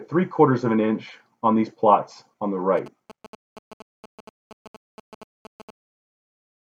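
From 2.77 to 5.71 s, audio circuitry rectifies a nearby 2G phone's GSM signalling bursts, producing galloping ticks and 217 Hz buzzes well beneath the sound.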